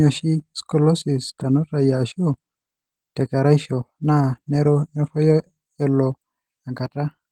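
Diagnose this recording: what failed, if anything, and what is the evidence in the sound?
Codec stage: Opus voice compression throughout the speech, plainly audible as a hoarse, slightly robotic texture despite content reaching about 20.2 kHz. The sound fits hybrid mode near 16 kbps, with coarsely coded excitation. A spectrogram shows blurred, smeared harmonics below 8 kHz and blotchy upper bands.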